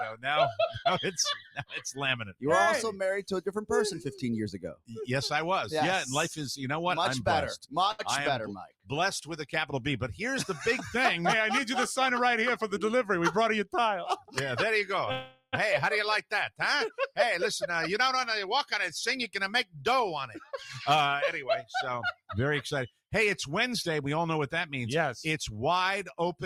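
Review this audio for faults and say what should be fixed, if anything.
A short stall from a late packet occurs at 7.91 to 8.01 s. The last sound is held for 74 ms while the jitter buffer sits empty, then playback resumes from the same point, so nothing is lost but the timing slips by 74 ms. Unlike the longer freeze later, it is brief, a held sound rather than a long fade. A modestly deeper jitter buffer target would absorb a late packet of this size.

The noise suppressor cuts the sound twice, at 8.67 to 8.90 s (down by about 17 dB) and at 14.20 to 14.36 s (about 16 dB), each time for roughly 150 ms. The suppressor misjudges steady or decaying sound as noise and pulls it down harder than its surroundings. What separates this from a network dropout is that the timing stays intact: the level sinks or a tail is clipped short, with nothing held or repeated. Lowering the suppression depth or making its noise estimate adapt more slowly would protect these passages.

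A call audio freeze runs from 15.12 to 15.55 s. The last sound is stretched into a fading buzz or hiss for 408 ms, including about 40 ms of silence, and then the audio continues from where it stopped, adding a gap without losing content. This points to the jitter buffer running dry, likely because packets were held up in transit. Its length and its decay toward silence set it apart from the 74 ms stall. Better network queuing or a larger adaptive buffer would reduce such gaps.

Jitter buffer speed-up appears four times: at 12.14 to 13.45 s at 106% speed with roughly 70 ms removed, at 17.33 to 20.36 s at 104% with about 100 ms removed, at 20.89 to 21.76 s at 106% with roughly 70 ms removed, and at 23.91 to 25.59 s at 105% with about 100 ms removed. Each time, the receiver trims short pitch-period slices in succession to drain excess buffered delay. The pitch stays the same while the pace quickens, which distinguishes this from a resampling error that would shift the pitch. 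Draining the buffer more gradually would make the catch-up less noticeable.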